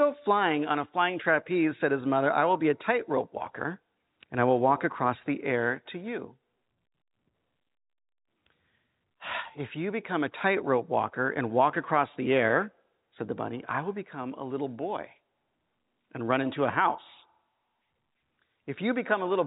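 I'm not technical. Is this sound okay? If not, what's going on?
Yes, this speech sounds fine, with nothing going wrong, just the narrow tone you'd expect from an ordinary landline phone call.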